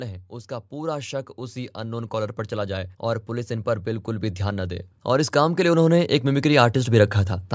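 From 0.29 s to 7.19 s the automatic gain rising kicks in: the control hears quiet input and slowly turns itself up about 14 dB, so voice and background swell together.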